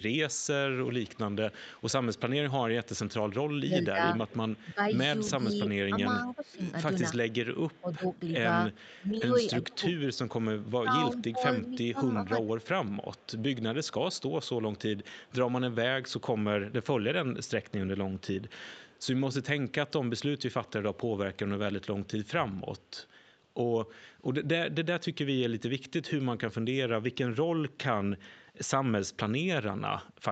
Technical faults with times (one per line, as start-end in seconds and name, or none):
0.82-19.06 echo leak
3.48-12.50 speech suppressed in double talk
20.67-23.22 echo leak